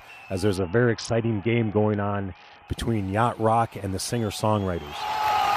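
From 0.56 to 2.68 s, a Bluetooth SBC bit pool drop, which fits a fall from 31 to 6 (about 55 kbps). Treble dulls, and gritty noise distinguishes it from simple low-pass filtering.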